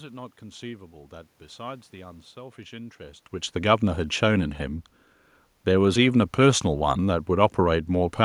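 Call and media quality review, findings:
No system faults found in the speech signal; the background is room noise at the microphone, and the level shift around 3 s is the talker moving relative to the mic, not a processing or transport issue.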